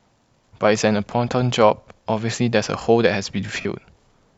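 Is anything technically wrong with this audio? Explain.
Yes. Lost LE Audio frames occur from 3.61 to 3.65 s, a gap of about 45 ms, which fits six consecutive 7.5 ms LC3 frames. The decoder conceals the gap by repeating the last spectrum with randomised signs and fading it, so the speech briefly turns into a hissy, noisy smear.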